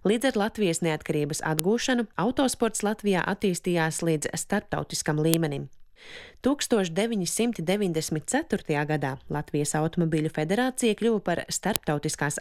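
Separate WAV pieces were joined without stripping their headers, so each header's bytes play as samples: a file header played as audio. That is the sharp, loud click at 1.59, 5.34 and 11.76 seconds, where each new piece begins, regardless of the surrounding sound.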